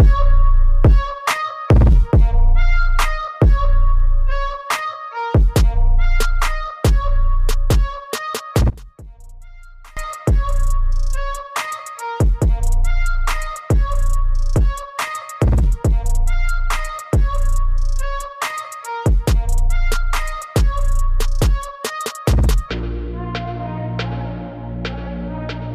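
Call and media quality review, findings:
Sound collapses to a faint residue from 8.70 to 9.97 s, level down about 22 dB; centred content nearly gone. One channel inverted is likely: reversed polarity on one stereo side, so the common signal cancels when summed to mono.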